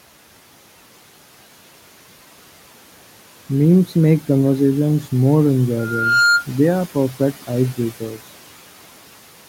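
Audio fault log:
5.78–6.46 s, loudspeaker feedback squeal: just after "make conversations more", a single steady tone at 1.4 kHz swells out of the speech over roughly 0.4 s and ends up sitting a few decibels above it before cutting off. The microphone is hearing the loudspeaker it drives, and at 1.4 kHz the loop gain tops one, so that frequency feeds on itself and keeps growing until the amplifier limits it or the loop is broken. The room noise sits about 21 dB under the speech.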